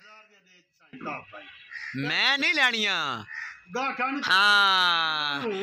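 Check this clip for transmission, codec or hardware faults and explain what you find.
One fault is present, at the very start. From 0.0 to 0.93 s the sound drops by about 23 dB, likely from one channel inverted: reversed polarity cancels everything common to both channels when summed to mono. Unlike a dropout, a faint residue remains.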